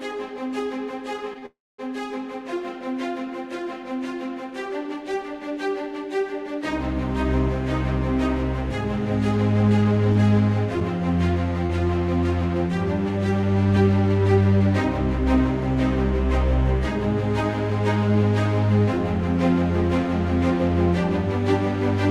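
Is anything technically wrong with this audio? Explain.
Yes, there are a few network-style glitches in here.

Right at 1.39 to 1.44 s there's a short stall from a late packet. The jitter buffer ran dry, so the receiver stretched the last bit of sound by 31 ms until the packet showed up. Nothing's lost, but that moment hangs a touch too long.

Straight after, from 1.46 to 1.80 s, comes a call audio freeze. It's likely packets got held up in transit. The receiver carries on the last sound for a bit, then it drops to silence for about 230 ms, 324 ms of added time in all. Then the audio picks up exactly where it left off.

Then there's jitter buffer speed-up in three places: 9.10 to 10.19 s at 109% speed, trimming roughly a tenth of a second; 12.24 to 14.75 s at 103%, again around a tenth of a second; and 17.71 to 17.97 s at 112%, a few tens of milliseconds. The buffer had piled up extra audio and sheds it by cutting tiny pitch-period slices, so the 109% and 112% stretches feel hurried without any pitch shift.

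Finally, from 10.13 to 13.44 s you get scattered short gaps: about four lost or late packets, the longest around 20 ms, 80 ms missing in total. Each gets patched by extending the previous sound, so you hear small ticks or smears rather than dropouts.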